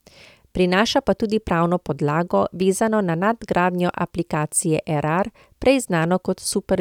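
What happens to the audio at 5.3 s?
Nothing goes wrong at 5.3 s: the speech carries on intact through that moment, with no dropout, click or other fault.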